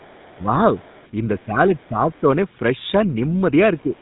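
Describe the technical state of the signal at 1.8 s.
At 1.8 s the speech is still passing through the GSM full-rate codec, as it does for the whole clip. That coder rebuilds the voice from a vocal-tract model driven by a sparse, regularly spaced pulse excitation, and its character fits a 13 kbps full-rate link. Nothing above 3.8 kHz survives, and the voice carries a plainly audible buzzy, gravelly roughness that stays present at this moment.

This moment also falls inside a stretch from 1.37 to 2.29 s where the talker's level is pulled down, most likely speech suppressed in double talk. The echo canceller appears to have faced both sides talking at once and, unable to tell its own talker from loudspeaker echo, attenuated everything. Across roughly three-quarters of a second within that span the voice dips and thins, falling by around 20 dB at its deepest.

From 1.78 to 1.86 s, right across 1.8 s, a brief scrap of a second voice sits faintly under the talker. 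This is other-side's-voice leaking through, likely from loudspeaker playback that the echo canceller failed to remove fully from the microphone. The leak is very quiet, around 40 dB below the speech, and lasts only about 80 ms, so it registers as a faint fragment rather than a clear second talker.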